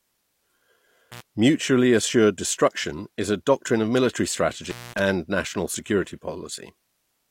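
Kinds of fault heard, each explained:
Intermittent contact: a loose connection briefly opens, dropping the speech for 72 ms and 206 ms, seen as near-empty waveform gaps framed by broadband crackle spikes.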